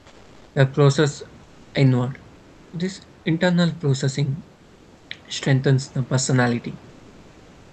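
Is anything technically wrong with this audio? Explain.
Yes. At 0.00–0.55 s, 1.43–1.73 s, 2.35–2.73 s and 6.89–7.73 s, comfort noise replaces the room background: the speech pauses become a steady, featureless hiss about 1–2 dB quieter. Unlike a noise gate, this fills the gap with noise rather than silence. The likely cause is Opus discontinuous transmission, which sends no audio during pauses and leaves the receiver to synthesise the fill.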